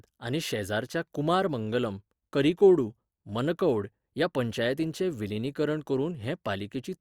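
Listening through the speech, nothing stood out as a technical problem at any point.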